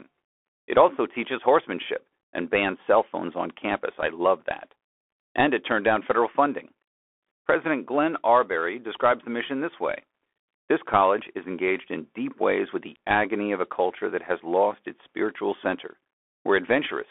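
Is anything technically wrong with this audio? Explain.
Yes. Throughout the speech there is the narrow, boxed-in sound of a phone headset. Nothing sits below about 300 Hz or above about 3.4 kHz, s sounds come out scratchy, loud bright passages crunch, and a fine granular hiss runs underneath. This is the Bluetooth CVSD headset codec. It codes each sample as a single up-or-down bit, consistent with 64 kbit/s, and its adaptive step size can't keep pace with fast, loud high-frequency movement, so the waveform is roughened.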